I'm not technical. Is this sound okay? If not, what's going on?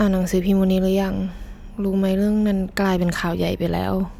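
No. From 2.58 s to the end, the speech picks up a faint gritty fizz caused by crude rate conversion. The audio was resampled by simply blending neighbouring samples without proper filtering, which adds unrelated buzzy tones that ride along with louder and brighter sounds.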